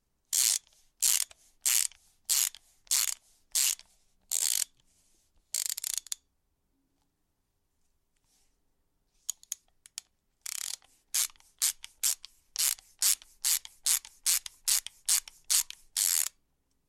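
No technical fault can be heard at any point in this recording of sounds; the signal holds steady throughout.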